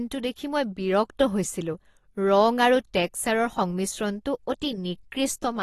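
Throughout, likely AAC compression at a bitrate fitting about 32 kbps cuts everything above 12.5 kHz, leaving the speech dull and smeared with fizzy sibilants.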